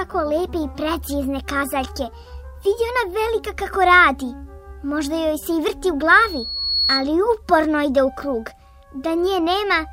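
At 6.08 s a thin, piercing whistle near 4.4 kHz rises out of the audio, swelling over roughly 0.7 s until it sits a few decibels above everything else, then stops at 7.08 s. This is loudspeaker feedback squeal: a microphone was picking up the loudspeaker it fed, and around 4.4 kHz the loop gain climbed past one, so that single frequency kept reinforcing itself.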